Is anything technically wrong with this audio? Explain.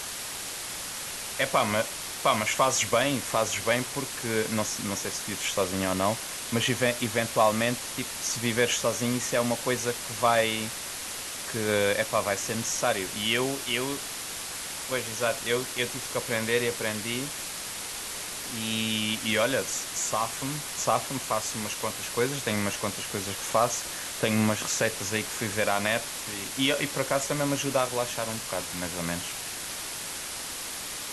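Yes. From start to finish, the speech sits under a loud, constant hiss that is even and unchanging, with no crackle or harsh distortion on the voice. The hiss is nearly as loud as the speech itself. This is low bit depth with dither: the audio has been reduced to just 4 bits, and random dither was added before rounding, so the coarse rounding error comes out as steady white noise rather than gritty distortion that follows the signal.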